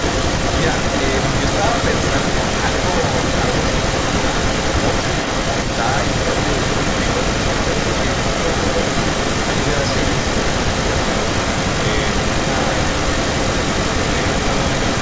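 From 0.0 s throughout, an echo leak repeats the speech about 400 ms later at roughly equal loudness, likely from a loudspeaker echo canceller failing to remove the returned signal.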